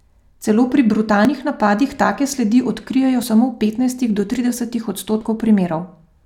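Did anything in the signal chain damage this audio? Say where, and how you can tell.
Yes. Speech jumps abruptly forward at 1.25 s and 5.21 s, about 20 ms gone each time, likely audio missing between 2-second chunks in recorder buffering.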